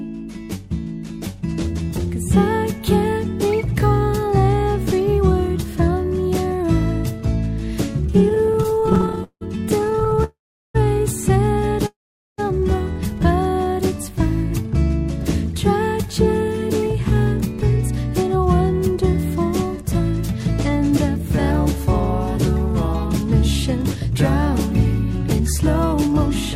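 Repeated stalls (stutter) run from 8.29 to 10.22 s: the audio keeps catching and dragging through roughly 40 brief gaps, the longest 172 ms, which together add 586 ms. About 30% of that stretch is filled by the receiver holding on to the last sound whenever packets arrive late or too slowly and the jitter buffer runs dry. Playback then resumes where it stopped, so nothing is lost but the flow stumbles. A call audio freeze follows at 10.24 to 10.76 s, and another at 11.86 to 12.40 s. In each, the sound smears on briefly and then falls silent, for 390 ms in the first and 440 ms in the second, before picking up exactly where it left off. The likely cause is packets held up in transit, emptying the buffer so the receiver bridges the wait with a fading continuation. Each freeze inserts a gap, about 0.5 s, and pushes everything after it later by that amount. A jitter buffer slow-down at 13.11 to 13.76 s stretches the sound to 93% speed at unchanged pitch, adding 56 ms. 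The buffer, running low, rebuilds its reserve by repeating single pitch periods or slivers of pauses, so sounds are drawn out slightly. Jitter buffer speed-up appears at 18.23 to 22.70 s, running at 102% and trimming roughly a tenth of a second, and again at 25.40 to 26.15 s at 106%, shaving about a twentieth of a second. Here the buffer holds more than its target after delayed packets bunch up, so it cuts short pitch-period pieces to reduce delay, making the later stretch sound hurried.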